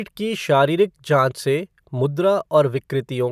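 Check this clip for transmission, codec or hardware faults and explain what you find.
No faults can be heard in the recording.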